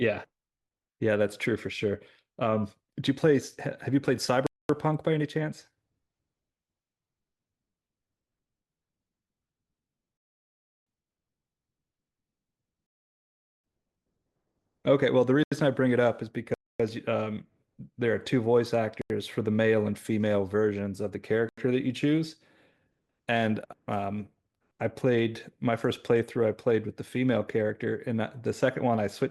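Speech is interrupted by five blocks of digital silence, at 4.47 to 4.69 s (228 ms), 15.43 s, 16.54 to 16.80 s (256 ms), 19.02 s and 21.49 s, the three short ones each 85 ms long, which fits a 4096-sample buffer left unfilled. Each begins and ends abruptly. The waveform drops to a near-flat line, and the spectrogram shows a dark vertical gap. Two rebuffering stalls, at 10.17 to 10.86 s (0.69 s) and 12.86 to 13.64 s (0.77 s), occur because the player ran out of downloaded audio. Speech halts, then resumes exactly where it stopped, adding time without losing any sound. These show as flat silent stretches, with the speech on either side joining up unbroken.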